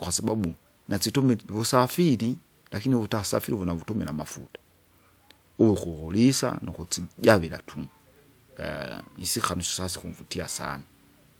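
Nothing jumps out here at all, since the recording just runs along without any glitch, dropout or other technical hiccup to point to.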